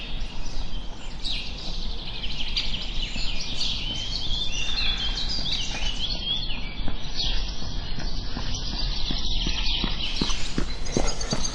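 Adaptive stream at a lower bitrate from 6.05 to 10.05 s in this recording of sounds: the quality suddenly falls with no gap, nothing remains above 6 kHz, and artefacts rise. This fits the stream switching from a 128 kbit/s MP3 to a 24 kbit/s version while the connection slowed.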